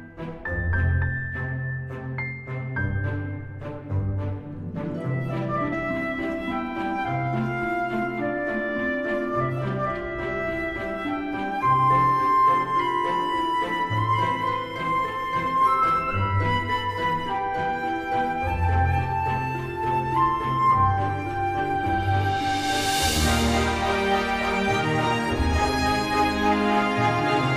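A brief glitch cuts through the sound at 5.71 s, and a second, similar blip follows at 15.82 s, each lasting under 20 ms. Both are damaged data in a compressed stream: a few bytes in the encoded file were lost or corrupted, so the decoder misread those frames, lost its place in the bitstream and had to hunt for the next valid frame header before playback recovered.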